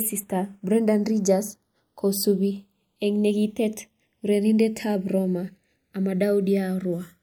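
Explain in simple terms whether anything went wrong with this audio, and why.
Something did go wrong here: the two channels are drifting apart. Each side was captured on a device with its own clock, and those clocks disagree by roughly 70 parts per million, so one side slowly falls behind, ending about half a millisecond late. Played together, this speech takes on a slow, swirling whoosh across the whole clip. A fixed gap between channels would sound steadily hollow; here the colouring keeps moving because the gap keeps growing.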